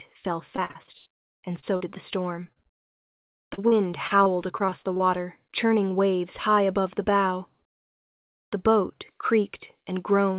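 Packets were dropped or arrived too late over and over from 0.56 to 1.94 s and again from 2.44 to 5.02 s, a case of repeated packet loss (robotic sound). Each hole, the longest about 82 ms in the first stretch and 40 ms in the second, was patched by stretching the previous sound, covering roughly a quarter and then a fifth of those spans. The audio turns choppy there, with pieces missing, over a call path band-limited to 4 kHz.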